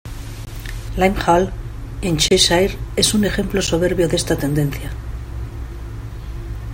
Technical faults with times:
0.45 block of digital silence
2.28-2.31 block of digital silence
3.67 block of digital silence

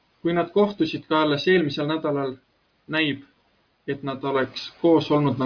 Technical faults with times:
none

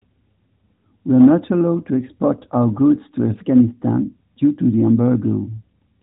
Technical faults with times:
none

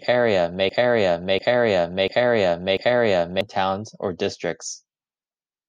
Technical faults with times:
0.00-3.41 broken-record loop

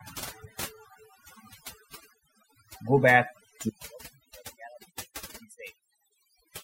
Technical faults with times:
0.00-6.64 overdone noise removal

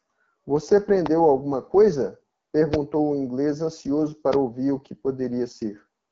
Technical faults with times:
0.00-6.12 AMR wideband (HD Voice) codec
1.06-1.09 loud pop
2.74-2.76 loud pop
4.33-4.36 loud pop

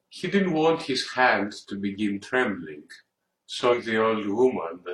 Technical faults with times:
3.69-3.75 damaged data in a compressed stream

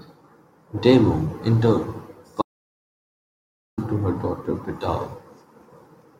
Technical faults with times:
2.42-3.78 audio dropout to silence

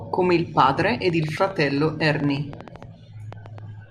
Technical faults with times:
1.10-3.91 train of clicks

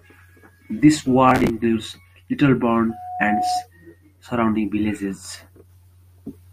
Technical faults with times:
1.29-1.50 processor overload crackle
2.89-3.67 loudspeaker feedback squeal

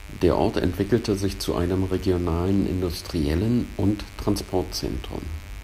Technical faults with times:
0.00-5.64 mains buzz

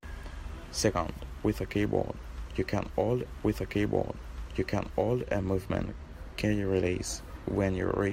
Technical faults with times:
3.25-5.25 stream segment repeated

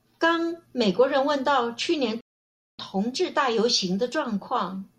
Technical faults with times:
2.21-2.79 rebuffering stall

